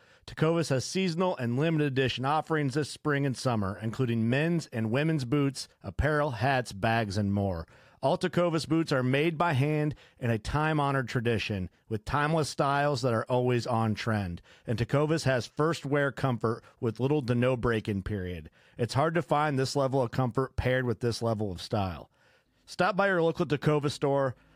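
Nothing in the signal of this speech recording points to a technical fault at any point.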